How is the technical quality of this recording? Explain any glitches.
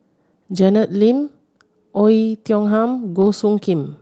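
The speech carries call-codec coding noise, with the high end cut off at 8 kHz, and there is one glitch.

Lost packet rebuilt from error correction, 3.21 to 3.27 s: about 40 ms of audio, which fits two lost 20 ms packets, was replaced by the lower-bitrate backup copy carried in the following packet. There is no dropout, but that stretch sounds briefly rougher and noisier.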